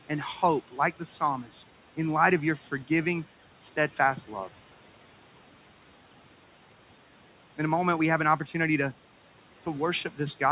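At 1.44 to 1.63 s, just before "in light of your", and again at 2.58 to 2.68 s, right after it, the speech turns faint and swallowed, dipping about 8 dB and about 7 dB. This is speech cut by the noise suppressor, which mistook these quieter stretches for background noise and pulled them down along with it.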